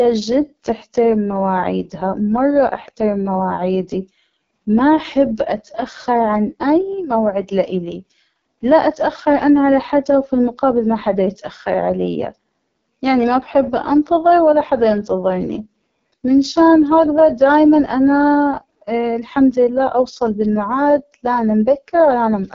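Throughout the clip, the speech has passed through the AMR wideband (HD Voice) codec at a very low rate; the heavy damage fits the lowest AMR-WB mode, 6.6 kbit/s. The vocal tract model gets too few bits to track the speech, so its excitation pulses are coded coarsely and the voice turns rough and raspy. Above 6.4 kHz there is only synthetic shaped noise in place of real detail, and nothing at all above 7.1 kHz.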